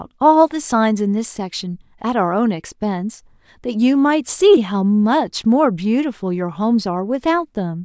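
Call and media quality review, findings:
No audible defects found in this speech recording.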